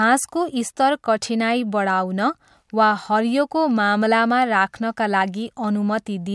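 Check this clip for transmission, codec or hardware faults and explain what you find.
No transmission, codec or hardware faults are audible here.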